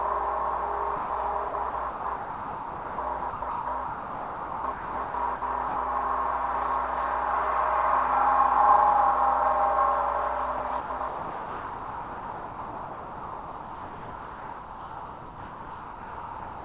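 At 0.96 s the sound gives way to steady noise for 140 ms and picks up again at 1.1 s. That's sound dropped by the voice detector, likely the sender deciding this stretch was background, stopping transmission, and leaving the receiver to fill in comfort noise. The same thing happens again from 5.68 to 5.76 s, an 80 ms hole.

Between those two, from 1.48 to 5.42 s, you get sound chopped by the voice detector, likely the sender's detector switching on and off more than once. It leaves two or more holes, adding up to about 2.58 s of comfort noise in that stretch.

The same chopping starts again at 10.58 s and runs to the end, with about 5.73 s of comfort noise in that last stretch.

Throughout, nothing reaches above 4 kHz, which fits a G.711 call path.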